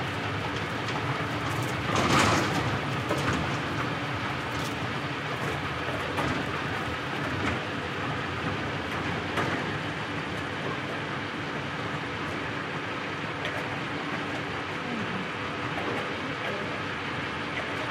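Nothing in this recording of sounds stood out as a technical problem on listening.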